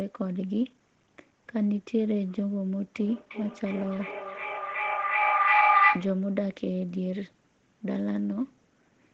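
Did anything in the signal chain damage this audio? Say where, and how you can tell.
Yes. At the call stage, a second device in the room replays this microphone's sound, and the microphone picks it up again beyond its echo canceller's reach. That feedback echo between two devices, from 2.98 to 6.19 s, repeats roughly every 0.4 s, building to about 7 dB above the speech.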